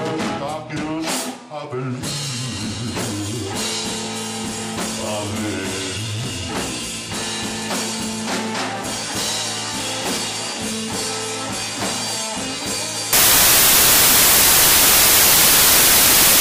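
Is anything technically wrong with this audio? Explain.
Yes. From about 13.13 s to the end at 16.40 s, the samples are built from the wrong bytes. The reader misassembles each sample, so the jittery low bits become the big part of the value. You get loud, harsh broadband noise, close to white on loud sounds.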